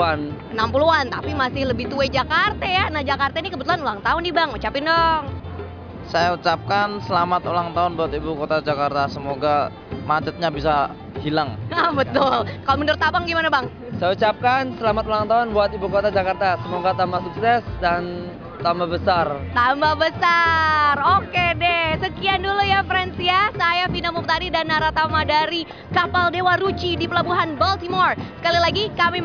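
Nothing to flag: no technical faults turn up at any point in the audio.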